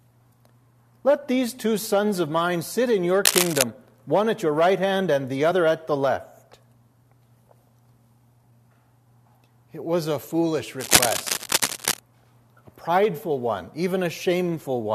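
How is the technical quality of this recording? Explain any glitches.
The recording has three technical faults: two bursts of cable scratch noise and one brief skip where compressed frames were dropped.

Cable scratch noise appears from 3.24 to 3.63 s and again from 10.79 to 11.99 s. Both times a dense, irregular rustling rides on top of the sound at roughly its own level. The likely cause is a worn cable, connector or control being moved, so that its contact resistance fluctuated rapidly.

At 5.50 s, compressed frames were skipped. About one frame, roughly 20 ms of audio, never played, and the sound jumps ahead. The 21.3 ms frame length fits 1024-sample frames at 48 kHz.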